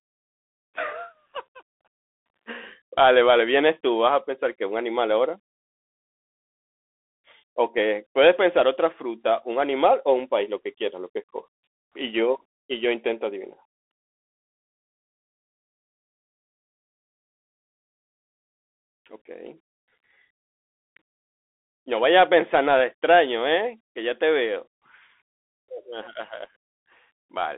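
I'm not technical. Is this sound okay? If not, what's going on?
No. The speech runs through a Bluetooth CVSD headset codec from start to finish. This is the basic phone-call mode of a wireless headset. It sends the sound as a fast stream of tiny up-or-down steps. Nothing above about 3.8 kHz survives, and the deep lows below about 300 Hz are thin too, so the voice sounds boxy and distant. The damage is plainly audible: s sounds turn scratchy, and a grainy hiss sits underneath.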